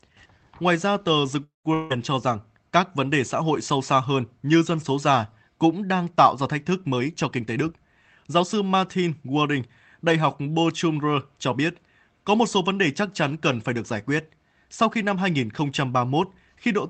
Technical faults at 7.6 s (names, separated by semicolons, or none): jitter buffer speed-up